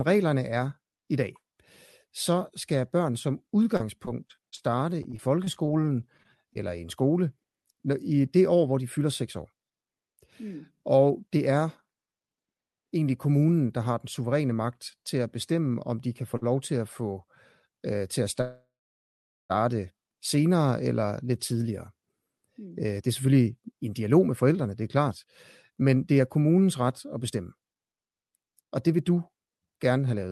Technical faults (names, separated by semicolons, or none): repeated packet loss (robotic sound); short stall from a late packet; call audio freeze; jitter buffer speed-up